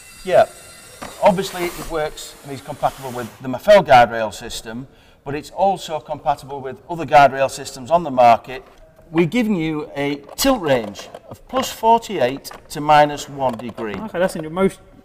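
A single loud pop interrupts the audio from 13.94 to 13.96 s, close to the end. It is one sharp burst that rises to about 10 dB above the surrounding sound. The sound carries on underneath it without a break. The likely cause is a sudden voltage step or pulse entering the signal, from a plug, a switch, static or a driver glitch. The circuits after that point shape the pulse into the short pop heard here.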